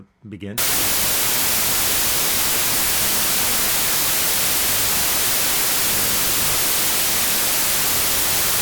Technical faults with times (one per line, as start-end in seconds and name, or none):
0.58-8.62 wrong sample width